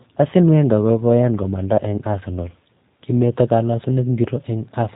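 A short speech clip that's been through the G.729 codec the whole way: nothing above 4 kHz survives, and the voice has that slightly rough, synthetic edge you get when speech is rebuilt from a vocal tract model and sparse pulses, which fits 8 kbit/s G.729A.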